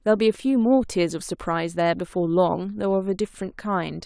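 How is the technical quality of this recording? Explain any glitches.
No glitches can be heard anywhere in the recording. There is nothing in the speech that needs explaining.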